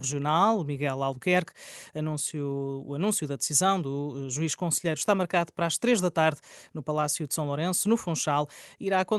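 No technical faults can be heard anywhere in this speech.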